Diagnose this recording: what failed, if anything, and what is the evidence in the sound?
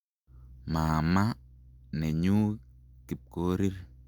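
Resampler restarted on every block, from 0.0 to 1.5 s, at the sample-rate conversion stage: a 100 Hz buzz rides on the speech there, matching 10 ms blocks, which fits a 48 kHz to 44.1 kHz conversion run per block without carried-over state, leaving an error at each block edge.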